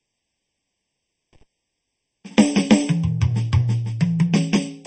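From the start, the music sounds hollow and phasey, with fixed notches that stay put as the music moves. This is channel delay (comb filtering): one channel runs late by around 0.4 ms and is then summed with the other into mono, so content common to both cancels at evenly spaced frequencies. The first notch sits around 1.5 kHz, with further notches repeating at regular steps above it.

Throughout the clip there is also plainly audible codec damage. The texture is watery and swirly, attacks are smeared, and nothing is present above 8.4 kHz. This points to MP3 compression, likely at a low bitrate around 32 kbps. When the encoder runs short of bits it drops weaker frequency lines, which flicker on and off from frame to frame, and it cuts the top of the spectrum at a fixed frequency.

From 1.33 to 1.43 s the music breaks up, with crackle at the edges of the break. This is an intermittent contact, where a loose cable or plug opens for a moment. 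The line is open for about 55 ms, and the signal drops out for that stretch before the connection closes again.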